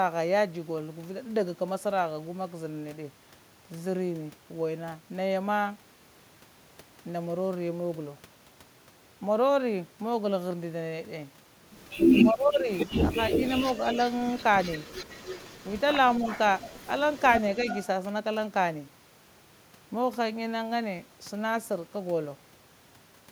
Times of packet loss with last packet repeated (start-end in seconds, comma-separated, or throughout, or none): none